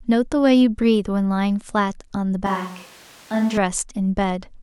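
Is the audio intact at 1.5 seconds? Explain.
Yes, the speech at 1.5 seconds comes through intact, with no dropout, click, distortion or other technical fault audible at that moment.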